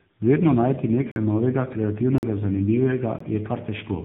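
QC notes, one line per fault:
Throughout, tandem speech coding: the speech passes through GSM full rate at 13 kbit/s, G.711, then AMR-NB at 7.95 kbit/s, so it is speech-coded twice in a row. Unlike single-codec roughness, the damage compounds into muffled, warbly speech with nothing above 3.8 kHz.
1.12–1.16 s, 2.18–2.23 s and 3.19–3.20 s, block of digital silence: the sound drops to silence and snaps back with no fade. The first two last 46 ms each, which fits a 2048-sample buffer, and the third lasts 19 ms. These are sharp holes, not soft codec dropouts.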